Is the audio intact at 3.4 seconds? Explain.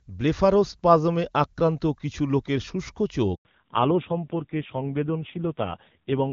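No. At 3.4 s the audio falls inside a handover gap running from 3.35 to 3.45 s, right after "কিছু লোকের শুষ্ক চোখ". While the call switched networks, no speech frames arrived, so the sound fades within a few tens of milliseconds and stays fully silent for 100 ms. Unlike a packet-loss dropout, no concealment fills the hole: there is no buzzy or smeared stand-in, only clean silence, and the link then resumes with a different sound.

That change is a fallback to narrowband, starting at 3.45 s and lasting to the end. Before the gap the HD Voice sound is clear, with content up to about 7 kHz. After it, nothing remains above 4 kHz, and the speech turns dull and rough. The roughness points to a low-rate narrowband mode around 5.9 kbit/s. This sets it apart from a plain low-pass filter, which would muffle the speech without adding coarseness, and from a bitrate drop within the wideband codec, which would keep the upper band.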